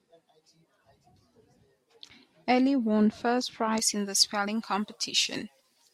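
From 3.79 s to the end at 5.94 s, the speech shows pre-emphasis left on: the treble was boosted before recording or transmission and never cut back. At 10 kHz the boost is about 11 dB relative to 1 kHz, which fits a J.17 curve, so sibilants turn harsh and thin.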